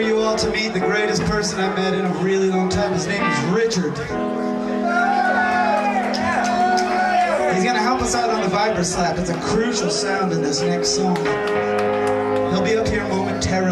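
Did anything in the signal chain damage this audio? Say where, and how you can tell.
No, I hear no damage from any stage.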